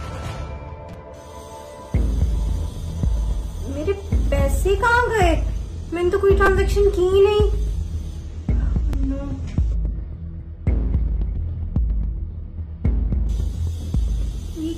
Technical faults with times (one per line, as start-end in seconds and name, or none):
0.93 repeated buffer
6.46 repeated buffer
8.93 repeated buffer